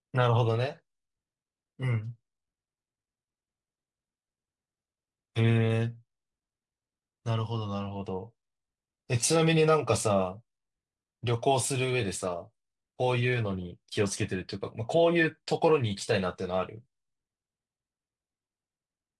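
No technical faults can be heard anywhere in the speech recording, which keeps a continuous, steady signal throughout.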